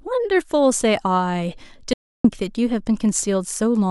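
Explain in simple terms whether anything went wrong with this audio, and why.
Audio dropout to silence, from 1.93 to 2.24 s: the speech cuts off abruptly, and for about 0.31 s there is total silence, with not even background hiss. The input was likely lost briefly while the recording kept writing blank audio, so that moment is missing.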